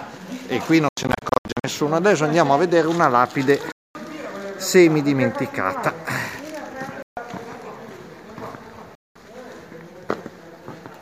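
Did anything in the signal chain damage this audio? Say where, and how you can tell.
Yes. The damage is at the playback stage: four Bluetooth dropouts, likely from the wireless link to the headphones. The sound falls to silence at 0.89 to 1.64 s as a cluster of short holes, the longest about 87 ms, then in single gaps at 3.72 to 3.95 s, 7.02 to 7.17 s and 8.95 to 9.16 s. Each returns mid-stream, as if it had played on, rather than picking up where it stopped as a buffer underrun would.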